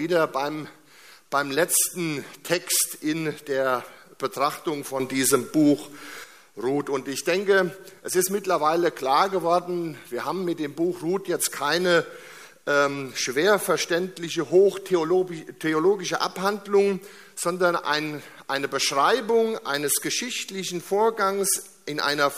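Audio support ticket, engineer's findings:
Sudden gain jump at 5.00 s. Level rises by about 8 dB in one step, background noise with it. Drops back at 6.24 s. Likely a digital gain setting applied without a ramp, changing level between adjacent samples.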